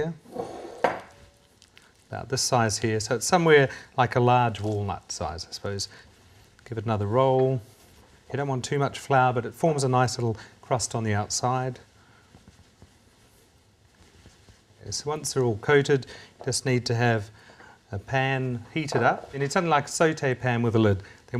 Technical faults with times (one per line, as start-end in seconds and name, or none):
none